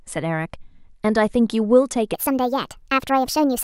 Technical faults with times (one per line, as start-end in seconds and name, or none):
2.14-3.63 section at the wrong speed